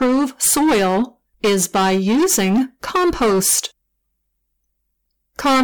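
Hard clipping runs through the whole speech clip. The signal is driven about 15 dB past what the stage can pass, so around a sixth of samples are sliced flat at the ceiling. Those squared-off peaks add high harmonics, heard as a harsh, constant fuzz on every loud syllable.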